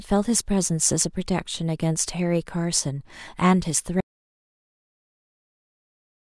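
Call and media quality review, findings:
Audio dropout to silence from 4.01 s to end of clip. Speech cuts off mid-flow into silence with no room tone and no recovery. Likely input loss upstream of the encoder (device disconnect, failed link or stray mute) while the recorder kept writing silence. Unlike a fade, gate or noise-suppressor pause, there is no decay tail and no residual noise floor. Unlike a packet-loss gap, nothing is concealed and the audio never resumes.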